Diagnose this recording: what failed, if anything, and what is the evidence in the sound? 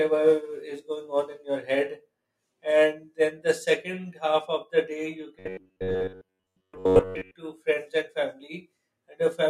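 The likely failure is buffer underrun at the driver or buffer stage, with a block of roughly 10.7 ms replayed in place of most of the real signal. From 5.39 to 7.35 s, robotic sound from repeated short buffers turns the speech into a rigid metallic buzz near 94 Hz.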